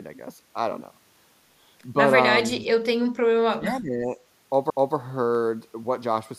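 At 3.07 s the speech briefly ducks by around 20 dB for about 50 ms, and from 3.42 to 4.17 s it sinks again, by around 25 dB at its deepest, over most of that stretch. The likely cause is speech suppressed in double talk: an echo canceller, unable to separate this talker from loudspeaker echo while the far side spoke, pulled the level down. Unlike a network dropout, the sound is attenuated rather than replaced by hard silence.

At 4.70 s a CD skip occurs. The laser jumped to another turn of the disc spiral, so playback mutes for only a few milliseconds, leaving a tick, then resumes from a different point. What separates it from a plain digital click is that the speech does not continue where it left off but jumps abruptly in time.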